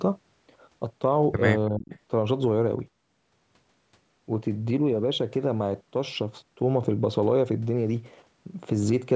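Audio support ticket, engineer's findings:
Speech suppressed in double talk, 1.7 to 1.92 s: voice sinks by roughly 30 dB for about a fifth of a second. Likely cause: echo canceller/suppressor gating near-end during overlap.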